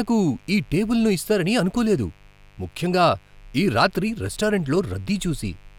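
From start to finish the speech sits over a mains buzz based on 50 Hz, around 35 dB below the speech. Sharp switching spikes, of the kind a dimmer, rectifier or unshielded cable lets in, arrive twice per mains cycle and fill the spectrum with 50 Hz harmonics reaching several kilohertz, so it sounds raspy rather than like a pure hum. A spectrogram shows evenly spaced horizontal lines running the whole length, and the waveform shows small spikes every 10 ms in the pauses.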